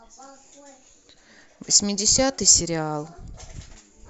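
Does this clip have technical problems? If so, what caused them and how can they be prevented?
Yes, there's a brief dropout from lost LE Audio frames at about 0.90 to 0.93 s, roughly 30 ms long, which fits three 10 ms frames going missing over the Bluetooth link. The LC3 decoder covers the gap by reusing the last good spectrum with randomised signs, so that moment smears into a short, noisy blur instead of clean speech. The light grain elsewhere is likely from the LC3 coding itself. To prevent it, improve the radio link (closer devices, less interference) or allow more retransmission headroom.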